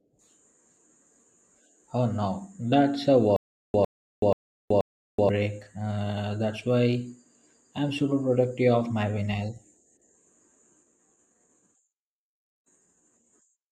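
Stutter with silent gaps from 3.36 to 5.29 s: a 103 ms burst of speech repeats four times, each followed by 378 ms of digital silence, an even 481 ms cycle. A stalled stream likely replayed its last fragment at each retry, so the audio meant for that stretch is lost.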